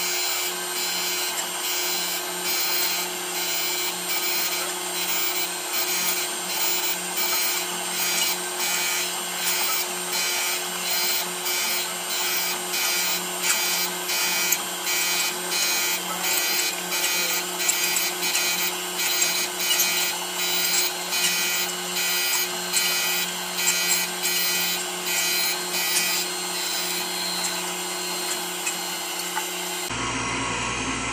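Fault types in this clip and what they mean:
No faults of any kind are detectable in this recording.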